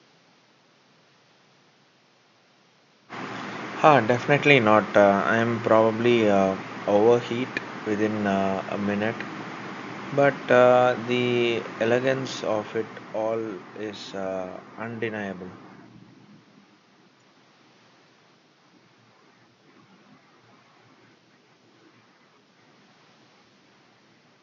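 No technical faults occur anywhere in the speech; the faint room noise, about 37 dB below it, is part of the recording.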